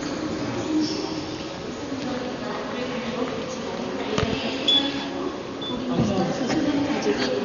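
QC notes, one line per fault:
throughout: Dolby Digital compression. Heavily damaged, dull sound, nothing above 7 kHz, with rough, fluttering noise around tonal parts. Likely a bit-starved AC-3 encoder narrowing the band and leaving empty frequency lines to dither noise, which fits roughly 48 kbps.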